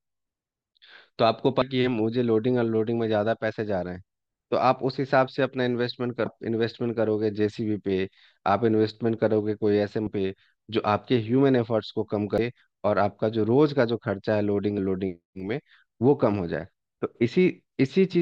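Speech with damaged data in a compressed stream: brief glitches at 1.6, 6.25, 10.06 and 12.38 s, where the decoder lost frame sync.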